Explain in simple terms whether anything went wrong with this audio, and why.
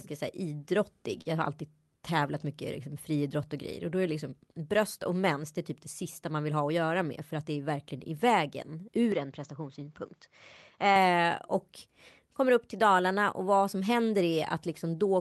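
Three separate faults can be heard in this speech.

At 1.21 s, just after "så här idrottig", there is a short stall from a late packet. A piece of the call's audio arrived late, so the receiver held the last sound for about 40 milliseconds until it caught up, then carried on from the same point. No speech is lost. What tells it apart from a dropout is that the sound is stretched rather than cut, which gives a brief held, slightly buzzy moment.

From 7.04 to 7.58 s, between "vill ha att göra" and "är verkligen i vägen", there is a jitter buffer speed-up. Audio had piled up in the receiver's waiting area, so it trimmed many tiny slices to catch up, about a twentieth of a second in total. The speech runs about 7% faster for that half second, but the pitch stays the same. That is why it sounds hurried rather than higher, unlike a sped-up recording.

From 9.12 to 10.96 s, after "är verkligen i vägen" and up to "och kommer upp till", the input switched to a poorer device. 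The sound turns duller because nothing above 7.6 kHz comes through. The call link itself carries sound up to 12 kHz, so this narrowing comes from the input and not from the call's compression. The cause is likely a change of microphone. There is no gap at the switch, the loudness stays the same, and any added background noise is very faint.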